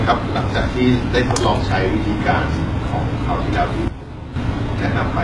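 Throughout the speech, the treble sounds gritty and lispy, with a hard ceiling near 11.4 kHz. It is likely HE-AAC compression at a rate fitting about 12 kbps, with upper bands copied from below.

From 3.88 to 4.36 s, a sudden gain jump drops speech and background about 11 dB at once. The waveform shows a step, likely from an unramped digital gain change.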